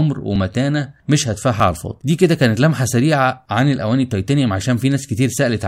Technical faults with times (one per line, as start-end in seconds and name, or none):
1.60 dropped buffer (overrun)